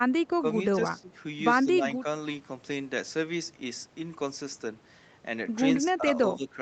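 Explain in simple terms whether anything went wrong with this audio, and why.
Speech suppressed in double talk shows up four times, at 0.94 to 1.15 s, 1.64 to 1.85 s, 5.87 to 6.06 s and 6.36 to 6.55 s. Each time the talker briefly turns noticeably quieter for a fraction of a second, then comes back. This likely happened because both ends of the call spoke at once, and the echo canceller, unable to tell this talker apart from the other person's sound coming out of the loudspeaker, turned everything down.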